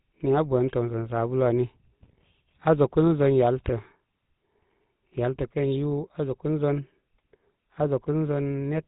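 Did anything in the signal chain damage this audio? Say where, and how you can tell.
Yes, at the codec stage, for the whole clip. This is the GSM full-rate codec. Nothing is left above 4 kHz. The speech carries a buzzy, gravelly roughness. A vocal-tract model driven by sparse, regularly spaced pulses produces exactly this, and the damage fits a 13 kbps rate.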